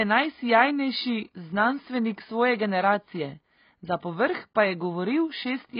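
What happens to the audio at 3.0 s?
At 3.0 s, like the whole clip, the speech sounds dull and smeared with nothing above 5 kHz, likely from heavy AAC compression at a very low bitrate, around 16 kbps.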